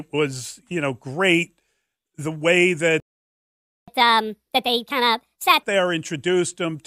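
At 3.0 s the speech cuts out for about 0.88 s, a playback stall, likely from the player running dry. The waveform shows a flat gap until 3.88 s. From 3.88 s to 5.63 s comes catch-up at higher speed: the backlog plays 1.5 times faster, raising pitch by about seven semitones. On a spectrogram the harmonics shift upward, then drop back.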